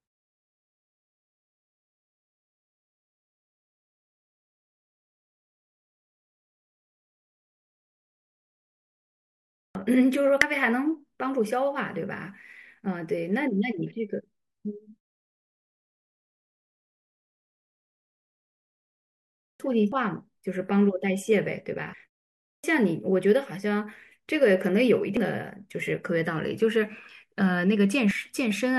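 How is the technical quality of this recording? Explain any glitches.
The recording has two recurring faults: clipped starts after pauses and brief bursts from damaged compressed data.

Clipped start after a pause occurs at 9.51, 19.34 and 22.39 s. Each time, about 240 to 260 ms of speech is lost. The output device sleeps in silence and wakes too slowly. Speech starts abruptly, missing its first sounds.

Damaged data in a compressed stream appears at 10.42, 19.92, 25.17 and 28.11 s, and from 21.90 to 21.94 s. The decoder misreads corrupted frames and resyncs. Each is heard as a short chirp or blip, sometimes with a skip.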